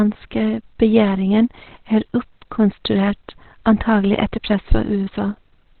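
Speech, and the whole thing sounds muffled and hoarse, with nothing above about 4.4 kHz. That's likely Opus compression, with the encoder dropped into its narrowband speech mode. The heavy damage points to a very low bitrate, something like 12 kbps.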